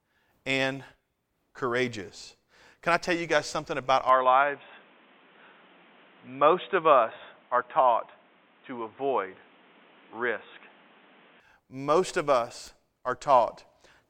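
Speech that turns dull and boxy right after "you guys something about", from 4.09 to 11.4 s, with nothing above 3.8 kHz and faint new background noise, then clears again. The likely cause is an input switched to a poorer device.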